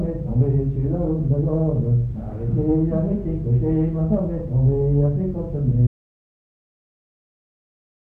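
At 5.87 s the sound cuts off mid-flow into dead silence, with no room tone, through to the end: an audio dropout to silence, likely from a lost input.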